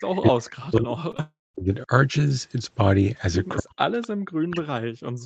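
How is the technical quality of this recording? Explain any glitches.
The recording has clear call-path damage: residual echo, repeated ducking of the talker, two brief concealed gaps and one longer dropout. All of it sits within a band that stops at 8 kHz, so a spectrogram shows nothing above that line.

Echo leak appears at 0.00–0.04 s, 4.01–4.08 s and 4.51–4.62 s. These are faint delayed copies of the voice played on the loudspeaker, returning 256 ms late, at about −30, −25 and −20 dB. The likely cause is an echo canceller on a loudspeaker end that left some pickup in its return. On a spectrogram they look like weak ghost harmonics offset 256 ms to the right.

Speech suppressed in double talk spans 0.09–1.9 s, 3.59–3.95 s and 4.38 s to the end. The talker's level dips sharply, by as much as about 40 dB, losing top end or cutting out in pieces. This is likely an echo canceller muting its own talker while the far side spoke. 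The waveform shows the envelope collapsing into gaps.

Short concealed packet loss occurs at 1.11–1.15 s and 1.17–1.20 s. Each time, 20 ms was missing and the decoder bridged it with 13 ms and 18 ms of extrapolated sound. Both are heard as quick smears or wobbles. A spectrogram shows briefly frozen, blurred harmonics with soft seams.

A long network dropout runs from 1.20 to 1.56 s, with about 0.34 s lost. The receiver extended the last sound and let it fade, then went silent for about 0.2 s before audio resumed further on. This was likely a network stall. The waveform shows a decaying tail, a flat gap and a restart.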